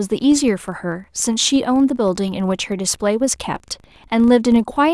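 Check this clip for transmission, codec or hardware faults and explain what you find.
There is one fault, present for the whole clip: a filter restarted on every block. A faint tick recurs 25 times a second, because the filter loses its stored state and starts each 40 ms block from silence. Unlike steady mains hum, this buzz rises and falls with the speech level and fades during pauses.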